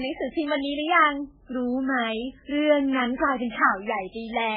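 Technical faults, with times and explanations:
Throughout, MP3 compression: the speech was likely squeezed through an MP3 encoder at a very low bitrate, around 8 kbps. The encoder discards everything above 5 kHz, so the speech sounds dull, and weak frequency lines switching on and off between frames leave heavy watery swirling.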